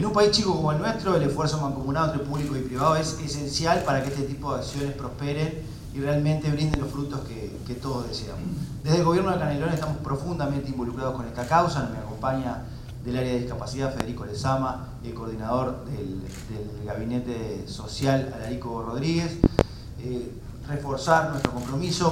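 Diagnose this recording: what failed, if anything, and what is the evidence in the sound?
Loud pops at 6.74–6.78, 14.00–14.04 and 21.45–21.49 s, plus a double pop at 19.44–19.63 s, rise roughly 20 to 25 dB over the continuing sound. They appear as tall isolated waveform spikes and thin full-height spectrogram lines. These are likely analogue voltage steps from a plug, switch or static.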